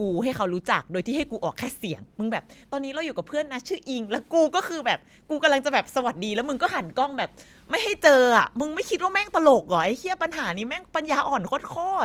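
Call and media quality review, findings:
Nothing stood out on listening to this speech recording.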